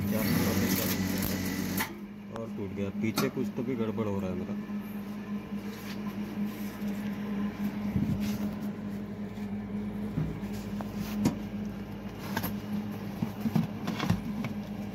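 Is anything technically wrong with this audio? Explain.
Yes, there is a loud pop from 2.36 to 2.38 s. A single sharp thump rises roughly 10 dB above the surrounding level, likely from a sudden voltage pulse such as a switch or static discharge. Unlike a dropout, the sound continues uninterrupted underneath.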